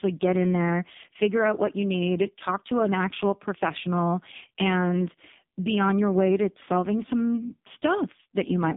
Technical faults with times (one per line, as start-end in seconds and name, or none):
0.00-8.77 AMR narrowband mobile codec